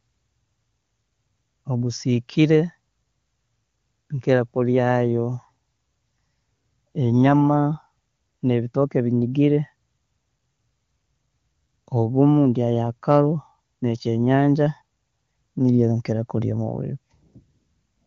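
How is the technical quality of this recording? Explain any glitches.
Listening through this speech recording, nothing stood out as a glitch or technical problem.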